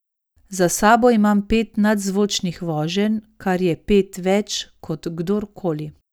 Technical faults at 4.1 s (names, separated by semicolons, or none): none